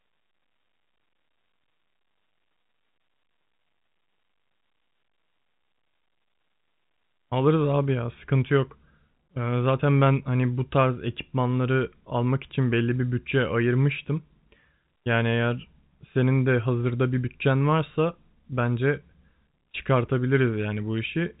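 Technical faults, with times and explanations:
Nothing here counts as a technical fault: the speech comes through ordinary G.711 telephone coding, so the top end stops at about 3.8 kHz, which is simply how a phone line sounds.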